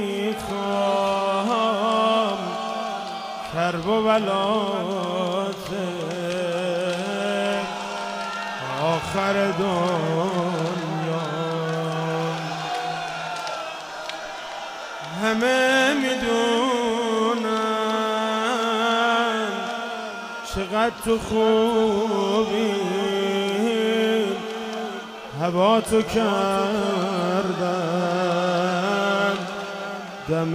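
No faults can be heard anywhere in this audio.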